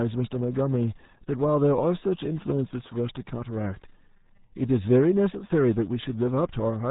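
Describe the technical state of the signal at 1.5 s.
At 1.5 s the speech carries a steady 100 Hz buzz of small ticks that rises and falls with its level. This is a filter restarted on every block: it starts each block from silence, so every boundary leaves a transient, here every 10 ms, for the whole clip.

The speech is also muffled and gargly, with nothing above 3.8 kHz and heavy codec damage. This is the RealAudio 14.4 codec, a dial-up speech coder whose sound points to a rate of about 8 kbit/s. It discards the upper band and smears detail throughout.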